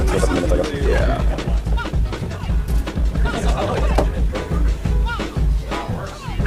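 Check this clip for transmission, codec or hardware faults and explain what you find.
One fault stands out. From 0.0 to 4.38 s there is a time-stretched section, sped up about 1.86 times with pitch held. It sounds rushed. Short pieces were likely dropped to fit a shorter length.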